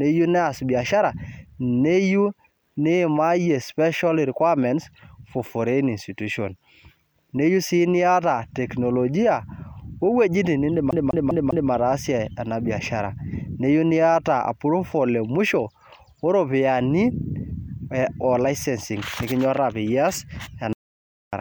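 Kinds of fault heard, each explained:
CD stuck on one turn: A scratch keeps throwing the laser back to the same spot, so one 200 ms slice of the speech plays four times in a row from 10.91 to 11.71 s, right after "niyata teknolojia wowuejitin nindim". Each jump leaves a brief mute, giving a fast, even stutter.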